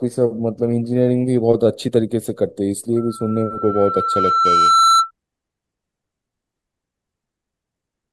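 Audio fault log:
2.96–5.11 s, loudspeaker feedback squeal: a 1.3 kHz tone builds over about two seconds to about 5 dB above the speech, as the microphone-to-loudspeaker loop gain exceeds one at that frequency.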